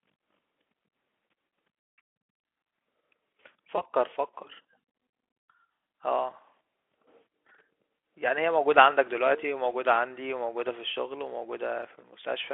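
At 3.75 to 3.81 s the speech briefly smears into a buzzy tone or coloured noise that fades before recovering. This is VoIP packet loss concealed by the speech codec, here the Speex path: about 20 ms of audio went missing, which fits one lost frame. The decoder filled the gap by extending its last pitch and filter with falling gain, and recovery took a few tens of milliseconds longer.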